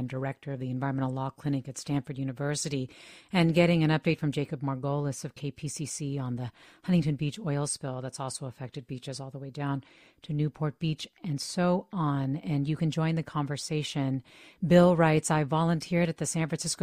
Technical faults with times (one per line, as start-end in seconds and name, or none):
none